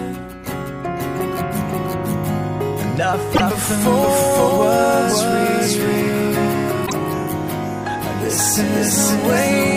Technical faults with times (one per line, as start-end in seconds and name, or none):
0.00-9.76 doubled audio track
3.33-3.41 damaged data in a compressed stream
6.83-6.93 damaged data in a compressed stream